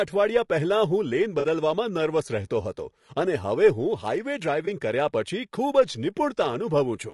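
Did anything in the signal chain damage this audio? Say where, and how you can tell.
Yes. The codec stage damages the whole clip. The speech is rough and grainy, with noise between the pitch harmonics and a thin, synthetic top band. The likely cause is low-delay AAC compression (AAC-ELD), whose short frames resolve harmonics poorly at a bitrate around 32 kbps.

The network stage adds AAC frame loss with concealment. Brief smeared, noisy patches occur at 1.39 to 1.45 s and at 4.65 to 4.68 s. The decoder fills each gap from the last good spectrum with scrambled detail. The lengths fit two lost frames, then one.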